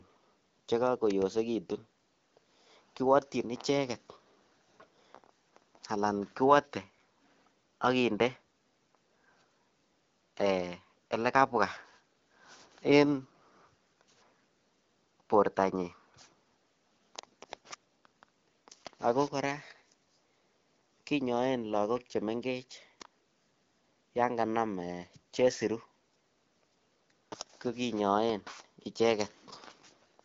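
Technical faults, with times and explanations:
No technical faults are heard in this speech, so there are no times or explanations to give.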